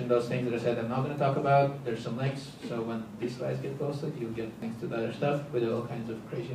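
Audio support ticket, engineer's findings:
Damaged data in compressed stream at 4.62 s. Brief blip. Decoder misread corrupted frame bytes, lost sync and resumed at the next valid frame header.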